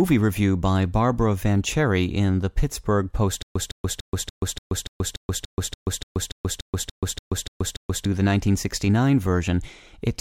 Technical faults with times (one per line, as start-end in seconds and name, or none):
3.42-8.05 stutter with silent gaps